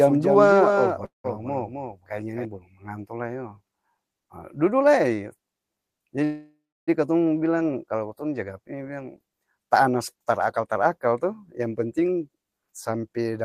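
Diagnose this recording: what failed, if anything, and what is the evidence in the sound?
A second copy of the speech runs about 0.3 s behind and about 5 dB quieter from the start until 2.45 s, just before "balom manganto". This doubled audio track likely comes from a slower capture path.

A call audio freeze at 1.05 to 1.26 s and another at 6.24 to 6.89 s stretch the last sound into fading buzz or hiss, then silence. Network packets likely stalled and the jitter buffer emptied, inserting gaps without loss.

From 11.59 to 13.39 s the speech runs about 11% fast at unchanged pitch. This jitter buffer speed-up trimmed roughly 0.2 s of pitch periods to cut excess network delay.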